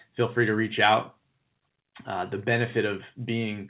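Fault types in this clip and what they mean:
Microphone volume stepped down: Right after "feel free to reach", at about 1.02 s, the speech and the background both drop by about 2 dB in a single step. This is likely the call software lowering the input volume of the microphone at the device. On the waveform, the envelope steps down at that instant and stays there. On the spectrogram, every band dims together, including the band-limited call audio that ends at 4 kHz.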